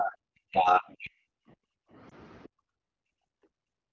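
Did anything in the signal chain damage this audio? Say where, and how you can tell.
Yes, at the call-processing stage first. From 0.01 to 0.17 s and again from 0.42 to 1.12 s the speech itself sinks, by about 25 dB in the first stretch and about 40 dB in the second, then comes back. That pattern points to speech suppressed in double talk, likely because the echo canceller couldn't tell the near talker from loudspeaker echo while both sides were active, so it pulled everything down together.

The same echo canceller also hits the background. From 1.4 to 1.99 s and again from 2.48 s to the end of the clip, the room sound between speech drops hard, by about 40 dB at the deepest, instead of holding steady. That's background gated by the echo canceller: while the far end was coming out of the loudspeaker, the canceller clamped the microphone, and the ambience only recovers when it releases.

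Then there's a network or radio problem. Between 2.09 and 2.13 s there's a short dip and wobble in the speech, which fits a single 20 ms AMR frame failing its check. The decoder papered over it by reusing the previous frame's pitch and spectral shape at reduced gain, so you hear a brief blur rather than a hard dropout. This is lost AMR speech frames, and here it's only one isolated event.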